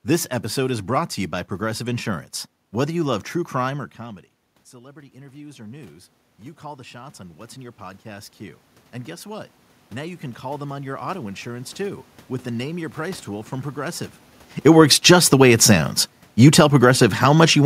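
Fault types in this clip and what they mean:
automatic gain rising: After "love true crime or", voice and room noise swell together for about ten seconds as the gain climbs about 17 dB to offset quieter input.
automatic gain falling: Near 14.5 s and again near 16.4 s, voice and background sink together as the gain control backs off about 6 dB, then about 4 dB.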